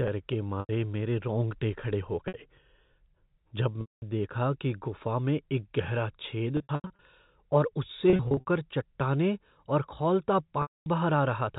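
Speech over a telephone-band channel, where sound stops above 4 kHz, is broken up six times by packet loss with pitch repetition, heard as brief held, buzzy tones or fades to silence at 0.60–0.69 s, 2.28–2.34 s, 3.81–4.02 s (just before "देखा कि गुफ़ा में"), 6.57–6.99 s (after "गुफ़ा में एक गहरा"), 8.10–8.46 s and 10.62–10.86 s (after "चट्टानें और खौलता"). Lost audio ranges from 60 to 240 ms, scattered in short runs at 6.57 s and 8.10 s, and the receiver fills each gap by looping the last pitch period, fading it out on longer gaps.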